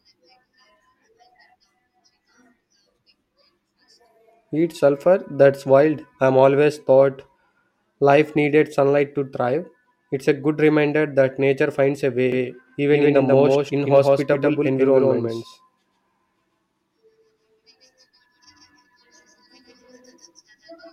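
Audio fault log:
12.32 s to end: doubled audio track. From here a second copy of the speech runs about 150 ms behind, at roughly equal level. It has no reverb tail. It starts abruptly, giving a hard slapback. Likely the audio is captured twice, once through a slower path.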